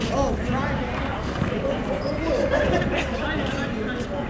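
Nothing here sounds wrong, just audio that came over a call link whose top end stops at about 8 kHz, which fits a wideband codec like G.722 at 64 kbps doing its usual job.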